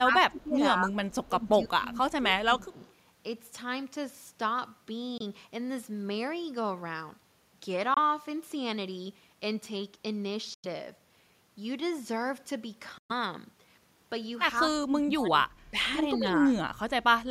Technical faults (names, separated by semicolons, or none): speech suppressed in double talk; echo leak; Bluetooth dropout